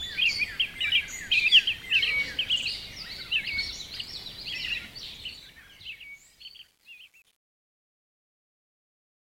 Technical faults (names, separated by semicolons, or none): truncation distortion on a fade